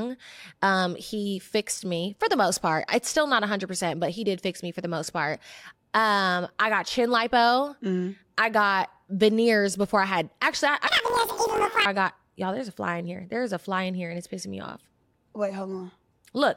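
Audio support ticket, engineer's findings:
Planar audio read as interleaved, 10.87–11.87 s: speech jumps an octave high (12 semitones) with a robotic buzz at about 46 Hz. Probable component is the channel-layout conversion. Each 21.77 ms block holds all left samples, then all right samples. Read as alternating pairs, each block plays left then right at double speed. Pace holds, but pitch doubles and the block rate buzzes.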